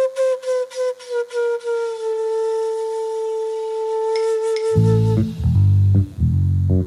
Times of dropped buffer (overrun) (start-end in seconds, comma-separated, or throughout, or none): none